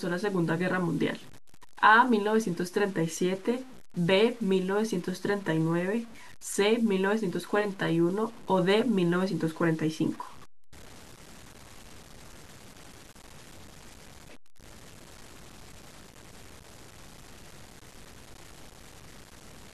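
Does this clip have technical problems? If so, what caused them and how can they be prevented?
Yes. Throughout the speech there's grainy distortion that tracks the voice, with quiet tails going gritty or sputtering out. That's likely low bit depth without dither: truncation to something like 7 bits leaves error only about 25 dB down. Keep enough bits, and dither whenever you reduce them.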